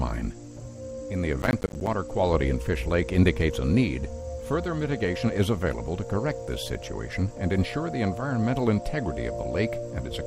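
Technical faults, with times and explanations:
1.42–1.87 s, processor overload crackle: the processor repeatedly missed its deadlines for buffers of around 10 ms, and each missed buffer dropped to silence with hard edges. Roughly twenty such gaps over this stretch form a gritty crackling burst across the sound.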